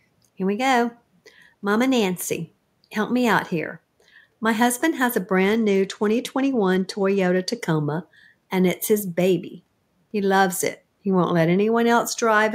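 Speech, with one Bluetooth SBC bit pool drop from 5.34 to 7.59 s. The treble goes dull and a gritty noise rises through that span. The link likely congested, so the encoder cut its bit budget. The sound fits a fall from bit pool 28 to 13, near 102 kbps.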